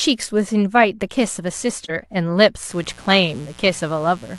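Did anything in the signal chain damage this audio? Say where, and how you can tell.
Yes. AAC frame loss with muting appears at 1.84 to 1.91 s, where the speech drops into a brief dip about 43 ms long. That length fits a single lost AAC frame, which points to the codec or network stage. The decoder filled the missing frame's spectrum with zeros, and the overlapping transform windows faded the sound out and back in around the gap. The result is a brief smooth dip rather than a hard cut.

Mains buzz starts at 2.70 s and runs to the end of the clip. It is a steady, raspy buzz built on 60 Hz, sitting roughly 25 dB below the speech. Its harshness comes from sharp switching spikes arriving twice per mains cycle, which spread harmonics of 60 Hz up into the kilohertz range. That points to the analogue wiring stage, such as a dimmer, a rectifier or a missing shield coupling mains interference into the signal path.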